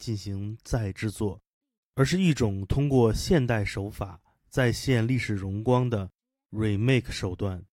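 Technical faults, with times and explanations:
No technical faults can be heard anywhere in this speech recording, and the signal holds steady for its full duration.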